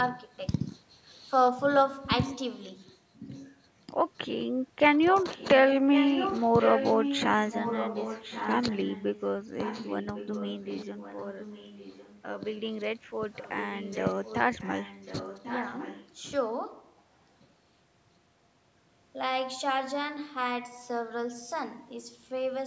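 Speech with echo leak: a copy of the voice returns 1.1 s later at 0.16–0.78, 2.84–3.55, 5.21–5.61, 5.93–9.24, 9.59–12.56 and 13.34–16.31 s. It is strongest around 5.93–9.24 s and otherwise well below the voice. On a spectrogram it shows as weaker, displaced repeats of earlier harmonic patterns. It is likely a far-end loudspeaker echo that the canceller did not fully remove.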